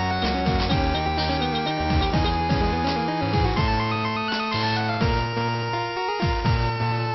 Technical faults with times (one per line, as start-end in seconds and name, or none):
none